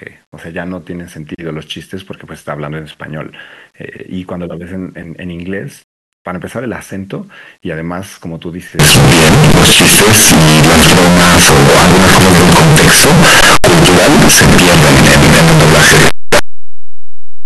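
From 8.79 s to the end, the speech turns into very loud, harsh distortion, with soft sounds as loud as strong ones. This is likely a signed and unsigned mix-up flipping the top bit of the 8-bit samples. The waveform jumps across the whole range at zero crossings, and the spectrogram floods with broadband energy.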